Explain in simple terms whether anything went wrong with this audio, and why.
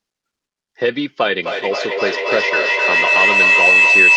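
Feedback howl, from 1.38 s to the end: two devices on the same call in one room kept picking up each other's sound, louder each round trip, until a shrill whistle around 3 kHz rises above the speech.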